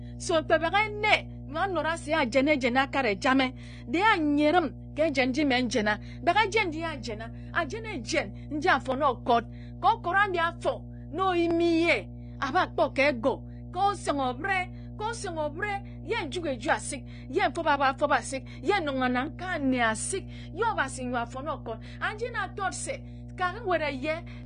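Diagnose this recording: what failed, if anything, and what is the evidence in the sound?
Analogue wiring failed, letting in mains hum. A steady 60 Hz tone with low harmonics sits under the speech for the whole recording, roughly 15 dB below it. This points to a ground loop or a nearby transformer coupling the 60 Hz supply into the signal path.

The codec stage shows damage that is likely AAC compression. Nothing is present above 9.7 kHz, so the speech sounds dull, with smeared, warbling sibilants. The coder quantised its frequency lines coarsely and lowered the bandwidth, which fits a low bitrate around 32 kbps.

The driver or buffer stage shows clock drift buffer slips. About ten regular clicks occur every 2.59 s, from 1.15 s to 24.43 s. The likely cause is two devices clocked a few hundred ppm apart, so their buffer periodically drops or repeats a small block of samples.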